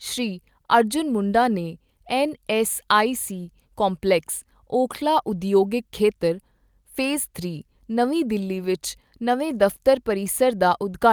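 No technical faults are audible.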